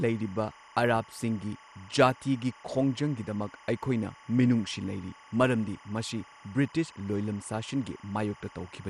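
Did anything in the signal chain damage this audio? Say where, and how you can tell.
Yes. Throughout the speech a steady chirping warble sits behind everything, switching between pitches near 1 and 2 kHz, roughly 25 dB below the speech. This is timecode bleed in the analogue wiring: linear timecode at 25 frames per second leaking from an adjacent cable or track.

The sound is also dull, with nothing above 13.6 kHz, and carries a plainly audible gurgling, granular roughness as upper bands flicker in and out. This likely comes from MP2 compression at the codec stage, which fits a rate around 64 kbps.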